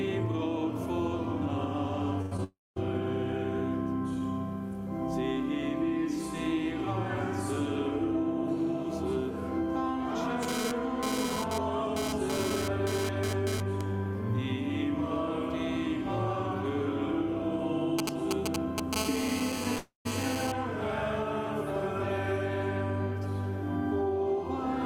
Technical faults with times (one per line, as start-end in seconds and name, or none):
2.21-2.33 burst of packet loss
2.37-2.40 short concealed packet loss
2.44-2.78 long network dropout
10.43-13.81 GSM phone buzz
17.99-18.95 GSM signalling bursts
18.96-20.52 GSM phone buzz
19.78-20.07 long network dropout